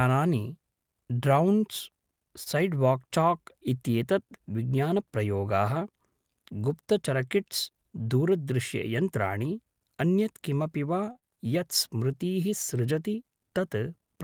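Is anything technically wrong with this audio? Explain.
Yes. This speech clip has three kinds of network playback fault.

Short stalls from late packets occur at 2.43–2.48 s and 11.12–11.17 s, the second just after "अन्यत् किमपि वा". Each time the jitter buffer ran dry, so the last sound was stretched by 25 ms and then 32 ms, with nothing lost. It sounds like a held, faintly buzzy syllable, and a spectrogram shows the last sound smeared horizontally.

A jitter buffer speed-up runs from 8.01 to 8.31 s. The receiver trimmed about 40 ms of pitch periods to play 10% faster at the same pitch, so the speech sounds briefly hurried. On the waveform whole cycles are dropped while the remaining ones keep their length, with no gap.

Short concealed packet loss follows at 11.19–11.24 s, before "यत् स्मृतीः". About 20 ms of real audio never arrived, and 30 ms of extrapolated sound covered the hole, giving a brief smear or wobble. 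A spectrogram shows a blurred stretch blending back into normal detail.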